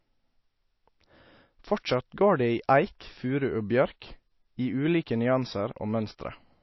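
All the way through, the speech has nothing above about 5.8 kHz and a plainly audible watery, swirly texture, with s sounds going metallic. That's likely MP3 compression starved of bits, which fits a bitrate somewhere near 28 kbps.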